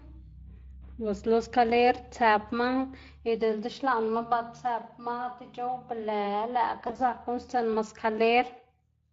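Throughout, the speech carries the plainly audible damage of the Speex codec: a hoarse, noisy grain. This sound points to a bitrate around 20 kbps. Unlike MP3-style swirling artefacts, the roughness sits in the excitation itself.

From 6.79 to 7.01 s comes VoIP packet loss concealed by the speech codec. About 100 ms of audio went missing in scattered gaps, the longest 40 ms, over a 200 ms stretch. The decoder filled each gap by extending the last pitch and filter while lowering the gain, so the sound smears into a fading buzzy tone or coloured noise rather than cutting to silence as a plain dropout would. It stays weak briefly after recovery.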